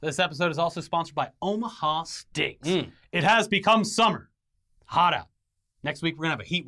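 Nothing in this speech recording jumps out as a technical fault; there are no dropouts, glitches or other problems to point to at any moment.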